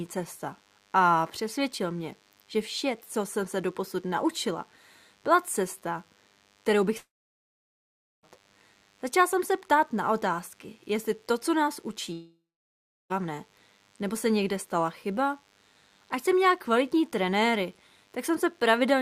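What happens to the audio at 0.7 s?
DECT cordless phone buzz runs through 0.7 s and the whole clip: a nearby DECT transmitter's 100 Hz radio bursts get rectified, adding a thin, faint, harmonic-rich buzz under the speech.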